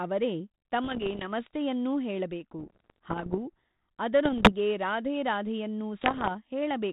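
Bit errors on an ADPCM link hit the speech at 0.84–1.29 s, 2.59–3.38 s, 4.25–4.53 s (just before "ರಾಧೇ ರಾಧೇಯನ್ನೂ") and 6.01–6.29 s (just after "ರಾಧೇ ರಾಧೇಯನ್ನೂ"). Corrupted bits, around one in a hundred, throw the decoder's step size and predictor off, producing pops and rough bursts with brief level jumps. Unlike the light G.726 coding damage, which fits 32 kbit/s, these arrive in isolated bursts.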